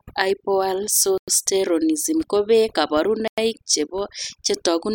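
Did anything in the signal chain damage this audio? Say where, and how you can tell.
Yes. Overdone noise removal in the processing stage runs throughout: the spectrogram shows a near-black background dotted with isolated twinkling specks.

A gap between chunks at the storage or playback stage leaves hard-edged 100 ms silences at 1.18 s and 3.28 s, 2.1 s apart. The waveform drops to flat lines there, though no sound is lost.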